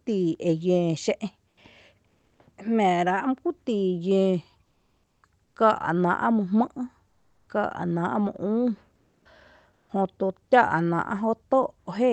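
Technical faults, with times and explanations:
1.49–1.57 s, 2.07–2.39 s, 4.63–5.23 s, 5.45–5.55 s (both before "káa’ náa’ mý jmɨ’"), 7.07–7.47 s, 8.95–9.25 s and 9.73–9.89 s (before "jötu táa’"), comfort noise in place of the background: the sender likely stopped transmitting during these speech pauses (Opus discontinuous transmission), and the receiver filled each gap with synthetic noise. The quiet room tone, about 40 to 50 dB below the loudest speech, becomes a flat, detail-free hiss. It drops by as much as about 10 dB at 1.49 s and about 7 dB at 8.95 s, by about 4 dB at 4.63 s and 7.07 s, and is barely changed elsewhere. The hiss sits inside the call path's 8 kHz band.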